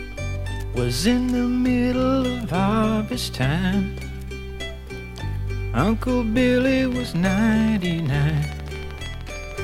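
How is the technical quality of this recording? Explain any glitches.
The recording has one clear glitch, a train of clicks running through its final few seconds.

From 6.61 s to 9.60 s, a steady ticking sits over the audio at 13.1 clicks per second, regularly spaced, about forty in all, each peaking a few decibels above the programme level. The likely cause is interference from nearby equipment or a faulty connection or power supply injecting the same pulse repeatedly. It is heard as a rapid, even popping that continues through quieter moments. On a waveform it shows as evenly spaced spikes standing above the signal; a spectrogram shows a comb of thin vertical broadband lines.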